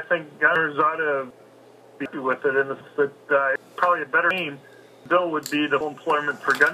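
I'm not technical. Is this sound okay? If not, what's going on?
No. There are skips at 0.56, 1.31, 2.06, 2.81, 3.56, 4.31, 5.06 and 5.81 s, each dropping about a third of a second with no gap left behind. This is audio missing between chunks, likely from a recorder working in one-second pieces.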